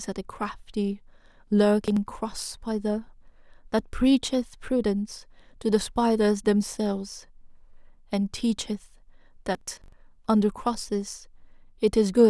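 Twice, the processor falls behind its deadlines: from 1.81 to 1.97 s, and again for longer from 9.55 to 9.93 s. That is processor overload crackle. With each missed buffer the audio is skipped outright, not filled in, so the speech is chopped by rapid hard-edged gaps. The spacing suggests buffers of around 20 ms, with several missed in the first burst and roughly twice as many in the second. Each burst sounds like gritty tearing that stops abruptly when the load eases.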